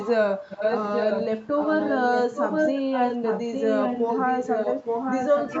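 Echo leak at 0.00–0.11 s: a copy of the speech about 10 dB below it returns about 0.85 s late, likely because a loudspeaker echo slipped past the echo canceller. Speech suppressed in double talk at 0.39–0.49 s: the talker dips by about 5 dB for roughly 0.1 s, likely because the canceller mistook overlapping talk for echo. The echo leak returns at 0.50–1.25 s, roughly as loud as the speech itself. It comes back again from 1.59 s to the end, somewhat quieter, with the same 0.85 s delay.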